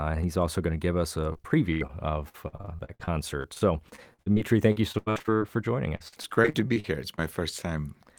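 Repeated packet loss makes the speech choppy and robotic at 1.33–1.91 s after "to give us a", at 2.29–5.42 s before "for joining", and at 5.96–7.20 s after it. About a quarter of each span is patched by stretching the last sound. On a spectrogram this shows as frozen, smeared harmonic blocks. In the waveform it appears as looped, repeated cycles.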